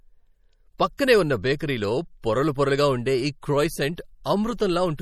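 Throughout the clip the speech has a watery, swirling quality, with metallic chirps on s sounds and softened consonant onsets. This is likely MP3 compression at a low bitrate, consistent with roughly 48 kbps. When the encoder runs short of bits, it zeroes weak frequency lines, and those lines drop in and out from frame to frame. That produces the shifting, underwater texture, and the coarse quantisation smears transients across each block.

At 0.97 s there is pre-echo: a short hiss leads a sharp attack by about 16 ms. The codec spreads its quantisation noise across the whole transform block, so noise sized for the loud attack also fills the quiet moment just before it. The same fault recurs from 3.96 to 3.98 s, where the hiss runs about 21 ms ahead of the onset. In both places the attack sounds blurred rather than crisp.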